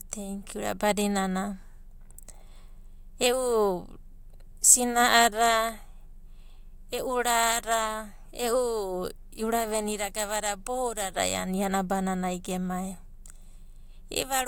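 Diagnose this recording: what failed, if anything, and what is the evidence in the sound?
Nothing failed; no stage of the chain shows a fault.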